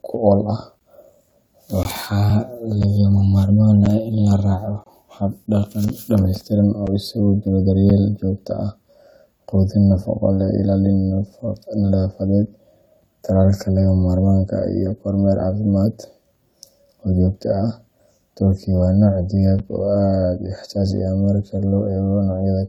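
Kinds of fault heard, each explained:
Gap between stream segments: Successive one-second segments are spliced with small timing holes that the player pads with silence, so the speech breaks briefly about once a second from 0.79 to 6.87 s, each hole 6 to 23 ms. On a spectrogram these show as hard-edged blank vertical stripes; the waveform drops flat.
Block of digital silence: At 19.59 s a run of samples about 7 ms long is replaced by zeros, cutting the speech abruptly to silence and back, heard as a tick. The waveform shows a flat line, and the spectrogram a narrow empty column.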